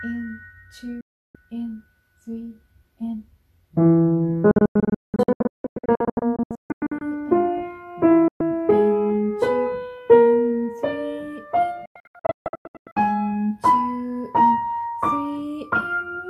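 Digital broadcast dropouts occur at 1.01 to 1.35 s, 4.51 to 7.01 s, 8.28 to 8.41 s and 11.86 to 12.97 s. Each time, the receiver stopped getting usable frames and muted, fading out over about 3 ms, until clean frames resumed. The first and third are single silences. The second is a string of short holes totalling about 1.5 s (longest 0.19 s), and the fourth about 0.79 s (longest 0.14 s). Everything sent during these gaps is gone.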